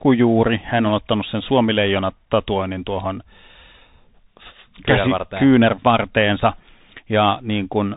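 Bluetooth CVSD headset codec damage runs throughout this speech: nothing passes above 3.8 kHz, and the one-bit, 64 kbps delta coding leaves plainly audible scratchy sibilants and granular hiss.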